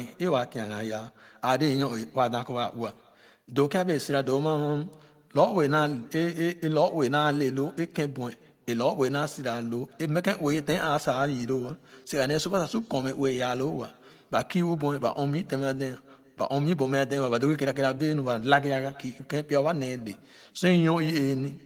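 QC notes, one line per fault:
Throughout, echo with no canceller: the far end's loudspeaker feeds its microphone, returning a faint, thin copy of the speech about 29 dB down, roughly 0.4 s late.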